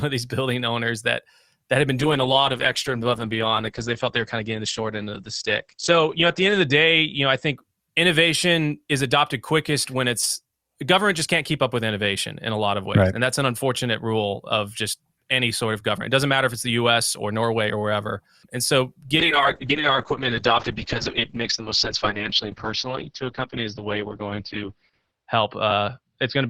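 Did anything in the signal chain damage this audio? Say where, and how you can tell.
Yes: a call bitrate drop at 2.0–7.63 s and 19.19 s to the end, where the encoder fell from 64 to about 11 and 7 kbps, turning coarse and muffled above 8 and 6 kHz.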